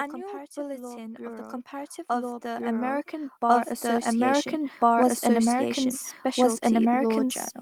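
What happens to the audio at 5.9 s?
At 5.9 s the speech is heard twice over. This is a doubled audio track, present throughout the clip. A second full-band copy runs roughly one and a half seconds behind, at about the same level. It is dry, with no decay or room colour. It is likely a second capture through a slower path.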